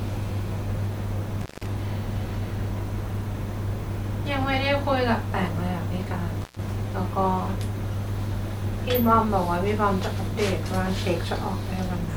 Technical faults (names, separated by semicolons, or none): intermittent contact